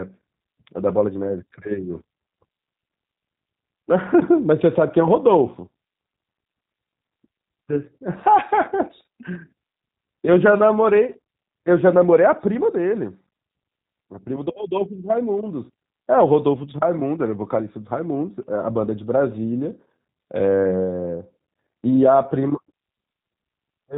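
Speech runs through G.729 coding the whole way, rough and synthetic, consistent with 8 kbit/s; a spectrogram shows nothing above 3.8 kHz.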